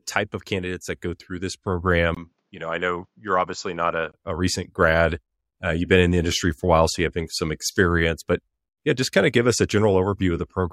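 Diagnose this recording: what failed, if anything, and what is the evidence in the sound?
The capture stage most likely had its input switched to a poorer device, handing the recording from one microphone to a lesser one and then back. From 2.15 s to 4.14 s the speech turns duller and drops by around 5 dB, with nothing above 7.6 kHz, and a faint new background noise sits well beneath it. A gap of about 20 ms marks the switch. The second device's narrower pickup, gain and self-noise replace the original's for those two seconds.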